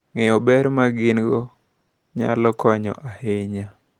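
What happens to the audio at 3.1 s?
Nothing goes wrong at 3.1 s: the speech continues intact through that moment, carried by light Opus voice compression with no fault there.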